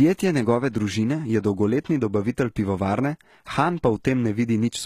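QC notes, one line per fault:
Throughout: likely HE-AAC compression, treble rebuilt from copied lower bands, so sibilants sound gritty and metallic; spectrogram shows repeated-looking high bands stopping near 14.9 kHz.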